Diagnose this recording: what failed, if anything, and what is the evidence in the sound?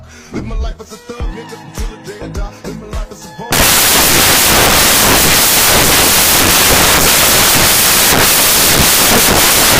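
The failure sits in sample-format conversion: from 3.52 s to the end of the clip, the samples are built from the wrong bytes. The sound collapses into loud, harsh broadband noise. The reader is misassembling each sample, through a byte offset, swapped byte order or wrong alignment, so the rapidly changing low bits become the most significant part of every value. Unlike a noisy analogue line or a hiss floor, the noise is loud and tied to the signal's presence rather than being steady.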